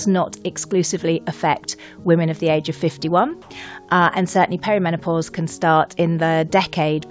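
From 3.42 to 3.50 s, the background, which sits about 27 dB below the loudest passages, gives way for 80 ms to a flat, featureless hiss about 3 dB quieter, then the real background returns. This is likely comfort noise in place of the background: the sending side's voice detector paused transmission, and the receiver filled the gap with synthetic noise matched only roughly to the room. The audio, carried over a G.722 call path, has nothing above 8 kHz.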